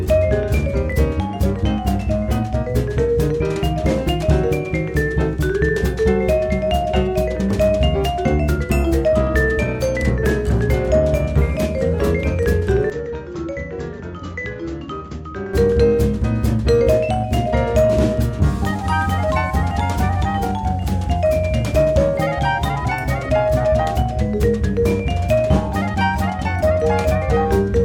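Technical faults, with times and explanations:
12.90–15.54 s: likely an input switched to a poorer device; sound drops roughly 10 dB, cuts off above 7.6 kHz, gains faint noise, switches without gap.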